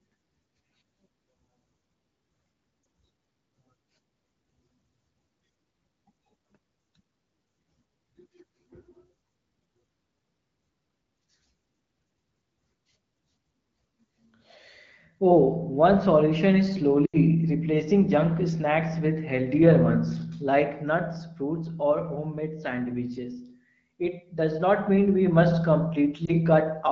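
Speech over a wideband phone channel, clear in the manner of AMR-WB at about 12.65 kbit/s, with brief dips and warbles at 2.83–2.85 s and 26.25–26.34 s and a drop to near silence at 17.05–17.17 s after "solution is". These are lost AMR speech frames: the decoder reused stale parameters with falling gain in place of frames that failed their checksum.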